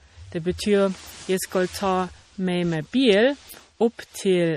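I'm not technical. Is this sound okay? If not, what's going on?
No. For the whole clip the speech has a watery, swirly quality, and the damage is plain to hear. The top end also stops dead at about 15.2 kHz, so the highest, airiest sound is simply missing. This is MP3 compression damage, likely from a file squeezed hard to save space. The encoder threw away the treble above that point and kept switching quieter details on and off, which is what makes it sound wobbly.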